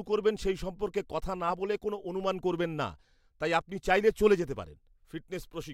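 No technical faults are audible.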